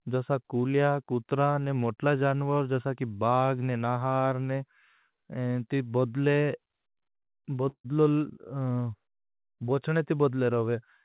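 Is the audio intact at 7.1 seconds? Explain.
No. From 6.44 to 7.28 s the speech drags and stutters through five brief holds of up to 40 ms. These are repeated stalls (stutter): late packets drained the jitter buffer, and the receiver stretched the last sound until audio resumed.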